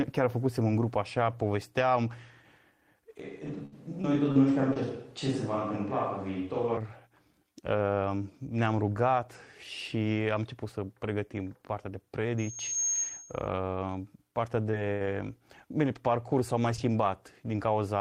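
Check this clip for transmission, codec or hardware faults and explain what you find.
Four faults are audible in the speech: a change to a distant pickup, a burst of robotic packet loss inside that stretch, a feedback squeal, and later some scattered short gaps.

From 3.20 to 6.77 s the sound turns roomy and hollow with thinner bass, little change in level, and faint room noise roughly 35 dB below the speech. This is likely a switch to a distant microphone, with the close microphone's signal dropped and a farther one used instead.

From 3.47 to 4.77 s there is repeated packet loss, giving a robotic sound. Four holes, the longest 62 ms and 140 ms in total, were each bridged by extending the preceding audio. About 11% of that span is synthetic, so it sounds choppy.

From 12.38 to 13.49 s there is a loudspeaker feedback squeal. A 6.5 kHz tone swells over roughly 0.4 s to about the level of the speech. 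The microphone is hearing its own loudspeaker, and at that frequency the loop gain passes unity, so the tone keeps reinforcing itself.

From 14.71 to 17.48 s there are scattered short gaps. Around three isolated losses, the longest near 70 ms and about 100 ms missing in all, were concealed by continuing the last sound. The result is brief hiccups and smears rather than sustained choppiness.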